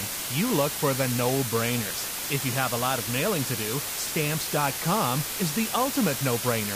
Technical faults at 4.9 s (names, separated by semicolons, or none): low bit depth with dither